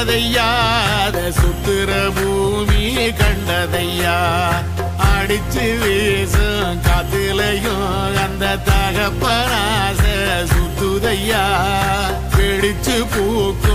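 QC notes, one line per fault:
throughout, stuck bit: a harsh, buzzy distortion sits on the sound, and quiet gaps fill with a gritty noise floor around -35 dBFS, likely from one converter bit held fixed. The waveform shows small square offsets near zero crossings, and the spectrogram shows broadband speckle where pauses should be dark.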